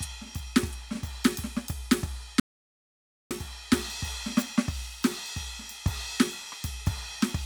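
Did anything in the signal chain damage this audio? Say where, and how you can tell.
Yes: an audio dropout to silence from 2.40 to 3.31 s, about 0.91 s of music replaced by silence, likely an input-side loss such as a disconnected source or dropped link.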